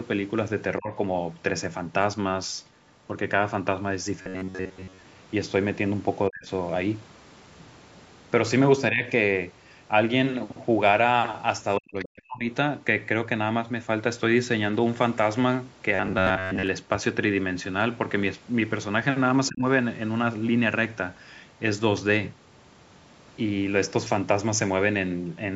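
A speech recording with two kinds of fault. The first is speech suppressed in double talk, likely from an echo canceller that could not tell the near talker from loudspeaker echo while both sides spoke, so it pulled the level down. Brief dips occur at 0.78 s, 6.29 s, 8.91 s and 19.49 s, each lasting about 0.15 to 0.2 s. A longer one runs from 11.78 to 12.46 s. The drops are about 10 to 40 dB, deepest in the 11.78 s dip and at 6.29 s. On the waveform they appear as sudden notches in the envelope. On a spectrogram the whole band fades or breaks into gaps. The second is robotic sound from repeated short buffers, at 4.22 to 5.02 s and 15.95 to 16.67 s. Audio likely arrived too seldom, so most of each stretch is made of repeats of a short chunk while the real audio is skipped. This gives a rigid, metallic buzz at 93.8 Hz, which fits a buffer of roughly 10.7 ms. On a spectrogram it shows as evenly spaced horizontal harmonics at multiples of 93.8 Hz. 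The waveform shows a regular repeating pattern.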